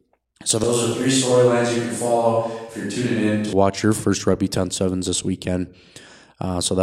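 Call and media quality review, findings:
Switch to a distant microphone, 0.64 to 3.53 s: close mic likely dropped out, capture falling back to a far pickup. Speech turns roomy and hollow, thinner bass, level down roughly 5 dB, room noise around 35 dB below speech. Abrupt switch just before "watch your first".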